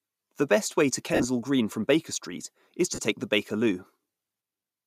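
At 1.14 to 1.25 s, lost LE Audio frames leave about 67.5 ms missing, scattered across 105 ms with a longest gap of roughly 50 ms. The decoder repeats the last spectrum with randomised phase, so the speech turns into a brief noisy smear that fades before normal audio resumes. A shorter loss of 37.5 ms at 2.94 to 2.99 s gives a similar quick hiss-like blur. The gap lengths match whole 7.5 ms frames, which likely points to LC3 transport.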